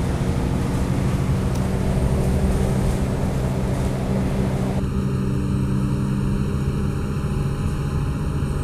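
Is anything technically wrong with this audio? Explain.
Yes. From 4.80 s to the end, channel delay causes comb filtering. One channel lags by under a millisecond, so mono summing cuts notches from around 700 Hz. The sound turns hollow.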